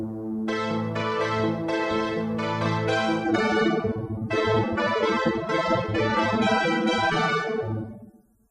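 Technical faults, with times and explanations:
3.25 s to the end: adaptive stream at a lower bitrate. With no gap, the audio abruptly loses its top end, nothing above 15.2 kHz, and codec artefacts thicken, which fits a switch from about 96 to 24 kbit/s AAC. Unlike a dropout, nothing goes silent.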